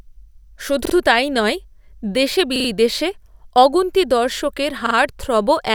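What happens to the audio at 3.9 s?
Nothing goes wrong at 3.9 s; the speech there plays through intact, with no dropout, click, glitch or other audible fault.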